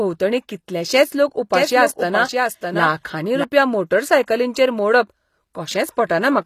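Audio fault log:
throughout: HE-AAC compression. The codec damage is plainly audible across the whole clip. Nothing is present above 15 kHz. The upper band is not the original treble. It is rebuilt from copies of lower bands, shaped by a coarse envelope. Harmonics in that rebuilt region do not line up with those below the crossover. The cause is likely low-bitrate HE-AAC encoding, which fits a rate of about 24 kbps.
1.54 to 3.44 s: doubled audio track. Just after "कितलेशेंच लोक", a second full-band copy of the speech runs under the original. It trails by about 0.7 s and sits roughly 5 dB quieter. It carries no decay or room colour, so it reads as a clean duplicate rather than an echo. It enters and leaves abruptly. The likely cause is the same audio mixed in twice, either through a second, slower capture path or an edit holding two copies out of step.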